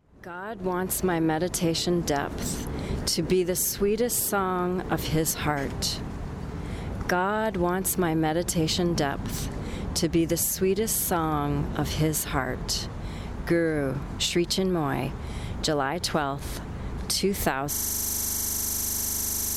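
A system hang loop starts at 17.73 s: the system froze while playback kept recycling one 40 ms buffer, giving a 25 Hz buzz lasting to the end.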